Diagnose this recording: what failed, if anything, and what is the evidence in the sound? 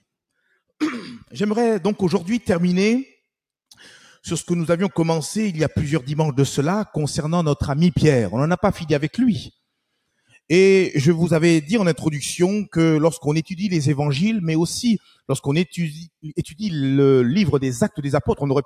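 Between 14.99 and 15.29 s the sound suddenly sinks, dipping by about 14 dB at its deepest and staying pulled down for around a fifth of a second before recovering. This is sound cut by the noise suppressor, a call-processing stage fault. The suppressor judged this stretch to be noise and attenuated it harder than the surrounding material, so real signal was removed along with whatever it treated as background.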